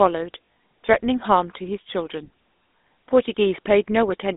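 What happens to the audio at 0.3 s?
At 0.34 s the sound briefly catches on a rough, metallic ring, as though held and smeared rather than cut, before carrying on. This is lost GSM frames: the decoder had no good data for a stretch and reused the settings of the last good frame. About 100 ms of frames went missing, scattered over roughly a quarter of a second, with the longest unbroken gap around 40 ms. Those gaps were too short to fade into silence.

Underneath, and throughout the clip, is the buzzy, gravelly roughness of the GSM full-rate codec at 13 kbps, with the band held to roughly 250 Hz to 3.7 kHz so the speech sounds narrow and telephone-like. The codec rebuilds the voice from a vocal-tract model driven by a sparse, regularly spaced pulse excitation, and that coarse excitation gives the plainly audible grit.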